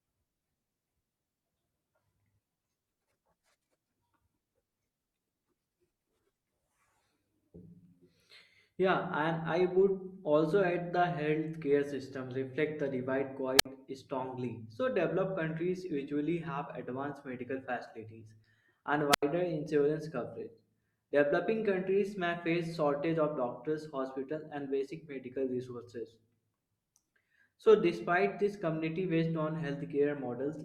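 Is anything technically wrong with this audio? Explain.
Yes. The speech has two wireless microphone squelch dropouts. The analogue FM radio link fades until the receiver's squelch mutes its output, so a brief rise of hiss gives way to near silence before the voice returns. After "system reflect the divide", this happens at 13.57 to 13.66 s with a mute of about 58 ms. After "advanced medical facilities and", it happens at 19.11 to 19.23 s with a mute of about 84 ms.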